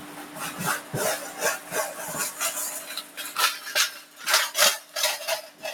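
A noise suppressor applied to music or sounds runs through the whole clip: a speech-tuned suppressor is treating steady and sustained parts as noise, so the level keeps getting pulled around, with a swing of around 10 dB that makes the sound pump and thin out.

On top of that, there are spots of sound cut by the noise suppressor, where it clamps down harder. The first is right at the start, 0 to 0.37 s, dipping about 5 dB. Then come 3.03 to 3.18 s and 4.01 to 4.2 s, both about 5 dB down, and finally 5.48 to 5.63 s at about 6 dB. Each of these sinks below its surroundings.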